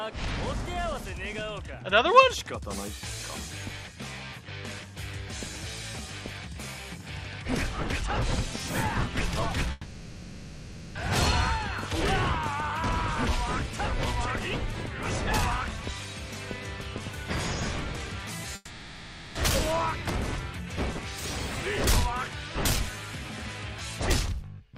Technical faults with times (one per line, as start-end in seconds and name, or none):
9.71-10.97 long network dropout
18.55-19.37 long network dropout